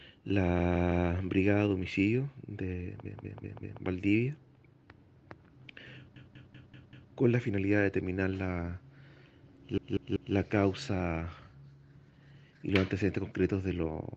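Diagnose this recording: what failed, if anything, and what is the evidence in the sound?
Repeated frames at the codec or storage stage: a short block loops at 0.59–1.07 s, 3.06–3.82 s, 6.16–7.12 s and 9.78–10.35 s, 160 ms first, then 192 ms, played three to five extra times. A frame run was written or sent repeatedly, stretching the audio.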